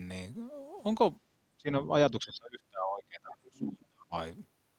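From 1.21 to 1.3 s the background is gated by the echo canceller. It pulls the microphone down about 10 dB while the far end plays, and the room sound briefly drops. From 1.58 to 1.93 s the speech dips by around 15 dB. From 2.11 to 4.14 s it sinks much deeper, roughly 30 dB, for about two seconds. This is likely speech suppressed in double talk, with the canceller mistaking the near talker for echo.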